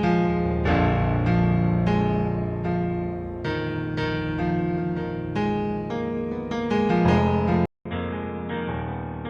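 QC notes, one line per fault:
7.66–9.29 s, input switched to a poorer device: after a 200 ms gap the sound turns dull, with nothing above 3.8 kHz, drops roughly 10 dB, and picks up new noise about 45 dB down, likely a move to a narrower-band microphone or headset call profile.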